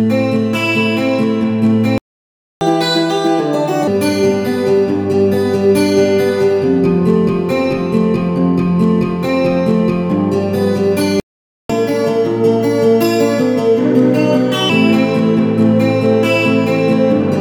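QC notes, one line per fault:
1.98–2.61 s, playback stall: the sound cuts out mid-flow for 0.63 s. The player likely ran dry or its thread got blocked.
2.61–3.88 s, catch-up at higher speed: the backlog plays back at 1.5x, so pitch jumps roughly a fifth, about seven semitones, for over a second.
11.20–11.70 s, playback stall: another gap, about half a second of silence. Likely the same starved buffer or blocked thread.
11.70–14.70 s, catch-up at higher speed: a gentler catch-up this time, 1.15x for 3 s, with pitch up about two semitones. It's a slight rushed lift.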